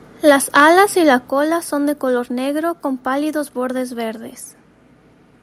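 Microphone overload from 0.28 to 0.81 s gives the loudest syllables of this speech clip a harsh, crackling edge, with peaks pushed about 4 dB past the converter's limit and a small share of samples flattened, likely because the input volume was set too high for the converter. Microphone volume stepped down at 0.30 s, by about 2 dB, and again at 1.29 s, by about 5 dB, with voice and background dropping together abruptly each time, likely the call software cutting device input volume in response to the distorted peaks.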